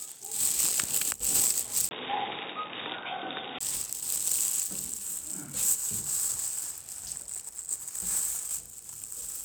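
Input switched to a poorer device, from 1.89 s to 3.61 s: after a 20 ms gap, the sound loses everything above 3.8 kHz, drops slightly in level and picks up a faint new noise floor well beneath it. It turns dull and boxy, then clears again at 3.61 s. The likely cause is the recording input jumping to a lower-grade microphone or a headset's narrowband call profile, then switching back.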